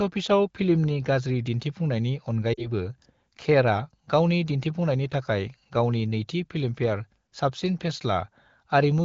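At 2.53 s, lost AMR speech frames cause a brief fade toward near silence. The wideband decoder repeats its last settings over 40 ms, fitting two frames, then recovers by 2.67 s.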